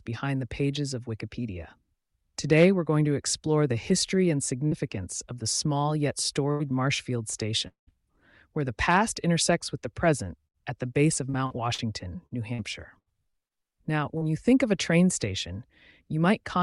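At 4.67 s, about 40 ms of audio failed to arrive in time and the receiver patched the hole by continuing the preceding sound. This short concealed packet loss is heard as a brief smear before the audio resumes.

At 6.51 s, a burst of packet loss removed about 80 ms. The continued sound is turned down as it goes, leaving a fading buzz or hiss and a small jump forward. The same burst of packet loss returns at 10.47 s, again about 80 ms, with the same fading fill and skip.

From 7.68 to 7.90 s, the audio turns into a held, fading tone and then about 120 ms of silence before returning further on, with some 200 ms missing. A long network dropout is the likely cause.

Between 11.30 and 13.53 s, eight separate gaps keep interrupting the sound, the longest about 76 ms, adding up to about 360 ms missing and roughly 15% of the stretch patched. This repeated packet loss gives a choppy, robotic texture with pieces absent.

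At 14.18 s, another short concealed packet loss fills a 40 ms hole with continued sound and stretches the audio very slightly, causing a brief wobble.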